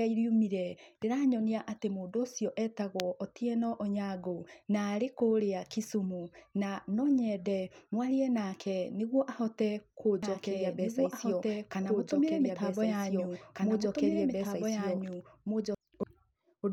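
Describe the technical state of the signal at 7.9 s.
At 7.9 s the speech signal is intact, with no audible technical fault at that moment.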